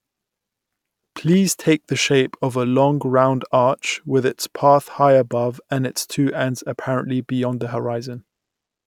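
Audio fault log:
No technical faults heard.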